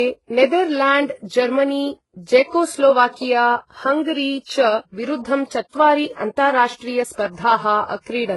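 Speech, with transcoding between lossy codecs throughout: two layers of codec artefacts are heard together, likely from a very low-bitrate HE-AAC encode re-encoded as Vorbis. A spectrogram shows nothing above 11.5 kHz and blotchy, patchy upper bands.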